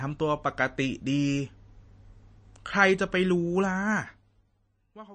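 From start to finish the speech carries plainly audible MP3 compression damage, likely from a low-bitrate encode, and the heavy damage fits a bitrate around 32 kbps. Nothing survives above 9 kHz, so s sounds lose their edge and the sound turns dull and watery, with a swirling, metallic quality on sibilants. On a spectrogram this shows as a hard flat ceiling at 9 kHz and patchy, flickering holes below it where weak components drop in and out between frames.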